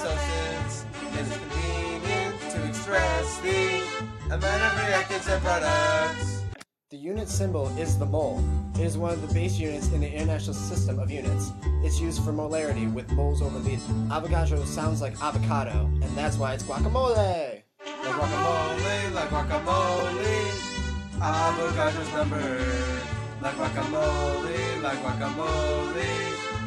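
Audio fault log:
3.99–4.02 s and 13.77–13.79 s, damaged data in a compressed stream: two brief blips, each about 20 ms long. Corrupted bytes in the compressed stream make the decoder misread those frames and lose sync until it locks onto the next valid frame header.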